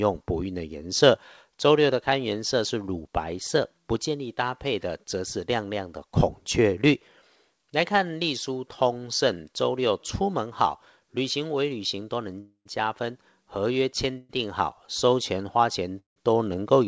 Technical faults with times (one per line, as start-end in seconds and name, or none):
12.40-12.67 call audio freeze
14.17-14.31 call audio freeze
15.99-16.18 call audio freeze